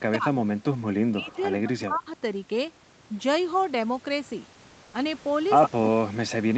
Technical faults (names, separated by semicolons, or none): speech suppressed in double talk; echo leak; comfort noise in place of the background